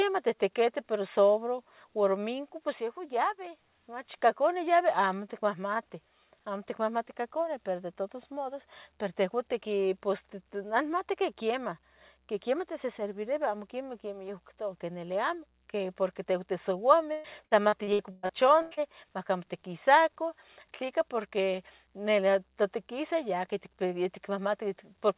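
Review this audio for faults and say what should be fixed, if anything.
Repeated packet loss (robotic sound) runs from 17.12 to 18.8 s. The audio keeps dropping out in short bursts, and each hole is filled by stretching the last sound, so the passage turns choppy with pieces missing. About a third of that span is concealed, and the longest gap lasts 122 ms. On a waveform, the envelope breaks into a ragged sequence of repeated cycles. On a spectrogram, the harmonics freeze into flat, smeared bands. Everything sits below the 4 kHz ceiling, which fits a narrowband telephone codec. A deeper jitter buffer, forward error correction, or a more stable network path would prevent the loss.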